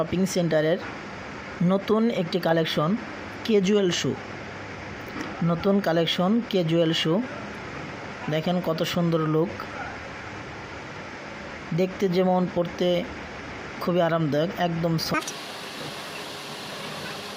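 The last stretch of the audio, from 15.14 s to the end at about 17.4 s, is a section at the wrong speed: it runs at twice the original rate, so everything is hurried and pitched up by around ten semitones. This most likely comes from an editor or player fitting that part to the wrong clock. On a spectrogram, harmonics jump upward and spread apart at 15.14 s, with events squeezed closer in time; the waveform shows denser cycles and shortened envelopes.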